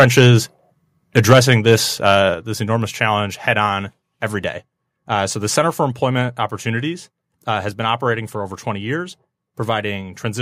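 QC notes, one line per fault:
0.0–0.29 s, 1.18–1.74 s and 2.06–2.18 s, microphone overload: the loudest peaks turn harsh and crackly, their tops flattened by about 7, 8 and 4 dB over the converter's ceiling, around 2%, 2% and 1.5% of samples; the last lands just before "this enormous challenge head", likely from excessive input gain.
1.33 s, 2.34 s and 3.66 s, microphone volume stepped down: voice and background drop together in single abrupt steps of about 4, 5 and 2 dB, the second just before "this enormous challenge head", the third between it and "every day", likely automatic gain reacting to the clipped peaks.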